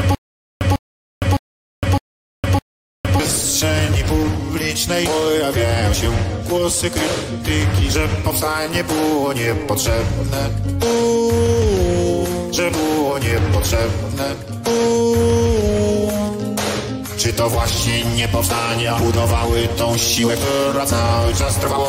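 From the very start until about 3.2 s, a stutter with silent gaps: a 0.15 s burst repeats five times every 0.61 s, separated by 0.46 s of digital silence. A stalled stream replaying its last fragment is the likely cause. The waveform shows identical blocks; the spectrogram, blank columns between.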